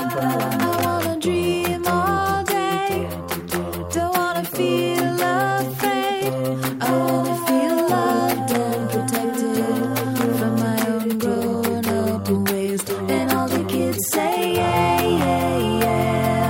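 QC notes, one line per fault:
No faults found.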